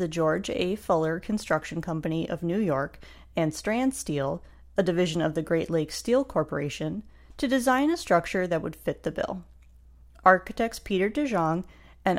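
Mains hum at 60 Hz runs under the speech for the whole clip, a ground loop or nearby transformer leaking the power line into the signal, sitting roughly 30 dB below the speech. Unlike broadband rumble, it holds one fixed pitch with low harmonics.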